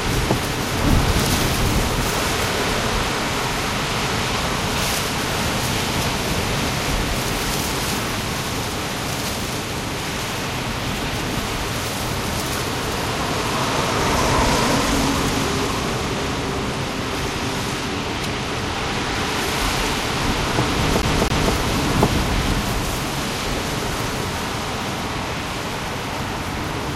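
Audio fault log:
21.02–21.54 s, CD stuck on one turn: the same 0.26 s slice of sound plays twice in a row, as a scratch sends the laser back one track at the same spot on each turn. The fixed loop length and even, rhythmic stutter separate it from random dropouts.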